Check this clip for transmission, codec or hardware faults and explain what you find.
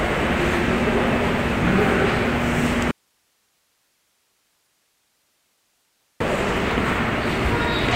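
There's one clear fault, an audio dropout to a faint residue. From 2.91 s to 6.20 s, about 3.3 seconds, the sound cuts out abruptly and only hiss remains, sitting roughly 45 dB below the normal level, before the audio snaps back in. The likely cause is the signal being lost upstream while the rest of the chain stayed live, so you hear its own noise floor rather than true silence or a natural fade.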